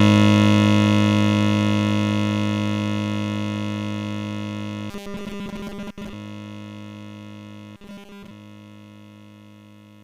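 New audio likely arrived too seldom, so the last 5 ms was looped instead, causing robotic sound from repeated short buffers at 4.90–6.13 s and 7.76–8.31 s. A rigid, metallic 200 Hz buzz replaces most of the music in the first span and all of it in the second.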